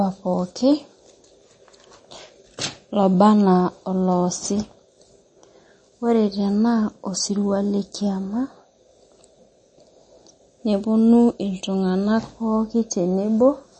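From start to finish the speech has nothing above 8.3 kHz, with a watery, swirling quality and chirpy s sounds, likely MP3 compression at a low bitrate near 32 kbps. A plain low-pass filter would dull the treble cleanly; here weak frequency lines also flicker between frames.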